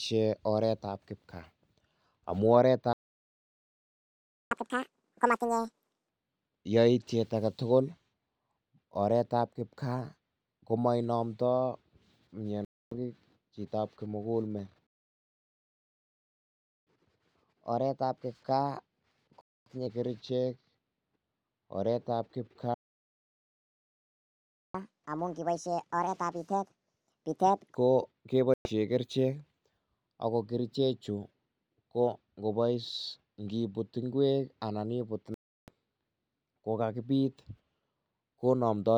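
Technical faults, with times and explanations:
2.93–4.51 s, 14.87–16.87 s and 22.74–24.75 s, playback stall: the speech cuts out mid-flow for 1.58 s, 2.0 s and 2.0 s, the second right after "chitab kimugul met". The likely cause is a player starved of data or a blocked audio thread, which leaves the output silent until it recovers.
4.51–6.09 s, 16.87–19.87 s and 24.75–27.75 s, catch-up at higher speed: each stall is followed by a burst of faster playback that works off the backlog. The first runs at 2.0x, raising pitch by roughly ten semitones. The second runs at 1.1x, about a semitone and a half higher. The third runs at 1.5x, around seven semitones up, and ends just before "ko ke".
12.65–12.92 s, 19.41–19.71 s, 28.54–28.71 s and 35.34–35.70 s, Bluetooth dropout: sharp-edged holes of 0.27 s, 0.30 s, 0.17 s and 0.36 s. The third hole comes right after "ko ke". The likely cause is audio packets that missed their delivery deadline to the headphones and were discarded. 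The speech resumes further along, as though it had kept playing during the gap.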